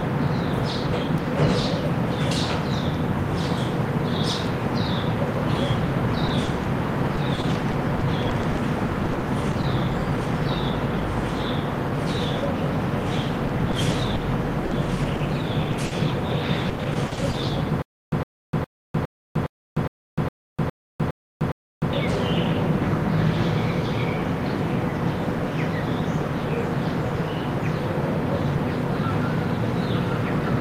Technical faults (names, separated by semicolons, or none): repeated packet loss (robotic sound); stutter with silent gaps